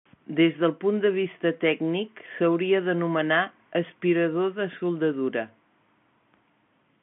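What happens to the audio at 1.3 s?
Nothing goes wrong at 1.3 s: the speech there comes through intact, carrying only the narrow, telephone-band character of its G.711 coding.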